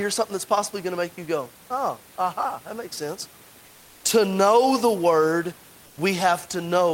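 After "aha that makes sense", from 3.67 to 4.03 s, and again from 5.87 to 5.95 s, the room's textured background becomes a flat, featureless hiss about 1 dB quieter. This is comfort noise in place of the background, likely from Opus discontinuous transmission halting the stream during pauses.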